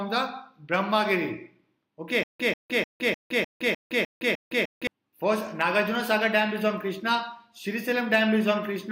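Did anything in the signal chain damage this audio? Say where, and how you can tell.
Yes, there's a stutter with silent gaps from 2.23 to 4.87 s, most likely a stalled playback or stream buffer. A 140 ms burst repeats eight times, with about 162 ms of dead silence between repeats, so the loop cycles every 303 ms. Each retry replays the last fragment, and the audio meant for that stretch is gone.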